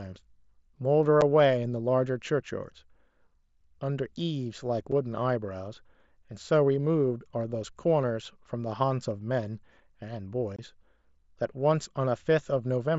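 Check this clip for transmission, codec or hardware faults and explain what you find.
The clip has unconcealed Bluetooth headset packet loss in three places, at 1.21 s, 4.92 s and 10.56 to 10.59 s. Voice packets between headset and phone were dropped and nothing filled the gaps, so the speech, carried over a wideband mSBC link topped out at 8 kHz, simply stops for 7.5 ms at the first two points and 22.5 ms at the third. The third gap fits several consecutive lost frames. Each loss leaves a short hole with abrupt edges that can click.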